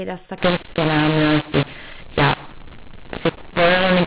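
From 0.38 s to the end, mu-law audio is decoded as A-law, so levels get scrambled. The speech turns harsh and distorted, and the pauses fill with noise.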